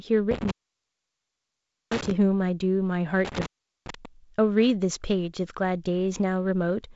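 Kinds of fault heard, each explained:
Intermittent contact: a loose plug or cable briefly opens the line, cutting the speech out with crackle at the edges, for 1.4 s and 0.4 s.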